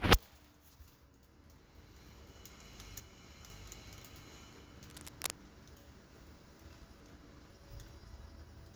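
From 2.5 to 3.5 s, chunks out of order: one 500 ms chunk plays one slot late, after the chunk meant to follow it, so that second of sound jumps out of sequence at the hard joins. Nothing is missing; the order is wrong.

From 4.90 to 5.33 s, cable scratch noise: dense, uneven scratching and rustling sits over the sound at roughly the same level as the sound itself. The likely cause is a worn cable, connector or control being moved, with its contact resistance changing rapidly.

From 5.5 to 7.5 s, chunks out of order again: a 500 ms chunk arrives three chunks late, playing after the three that should follow it. The result is a longer jumbled passage with hard joins where the misplaced chunks meet.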